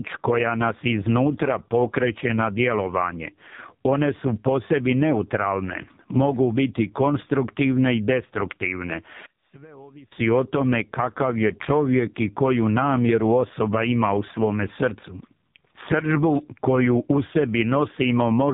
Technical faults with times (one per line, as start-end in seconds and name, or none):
0.00-18.53 AMR narrowband mobile codec